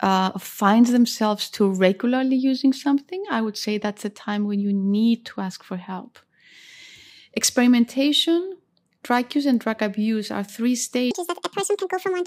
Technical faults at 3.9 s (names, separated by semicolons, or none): none